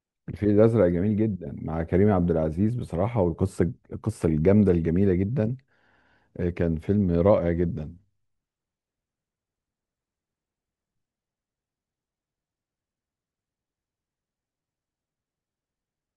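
Listening closely to the speech, nothing stood out as a technical fault at any point.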